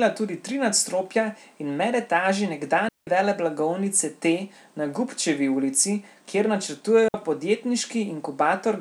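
At 2.89 s, right after "tri nadstropja in medetaži", the speech drops into near silence for about 187 ms, returning at 3.07 s. A second, shorter hole follows "ulici kjer" at 7.08 s and lasts 60 ms. Both are digital wireless dropouts: the receiver lost too much of the incoming data stream and muted its output with a very quick fade. Each gap is clean, with no noise burst on either side.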